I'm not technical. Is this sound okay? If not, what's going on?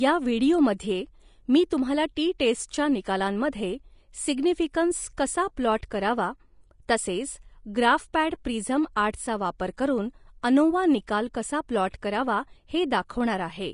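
No. From start to finish the speech sounds hissy and grainy, with a dull top end: nothing reaches above about 10.5 kHz. The likely cause is heavy Vorbis compression, which throws away the high frequencies and swaps fine treble detail for rough noise.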